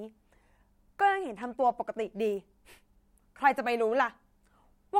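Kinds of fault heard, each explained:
Loose connector crackle: a worn or dirty contact somewhere in the signal chain briefly lost and regained its connection, so the audio path was interrupted and restored in rapid succession, and any DC sitting on the line turned each break into a pop. In this speech clip it is a single short scratchy burst at about 1.43 s, lasting only around a hundredth of a second.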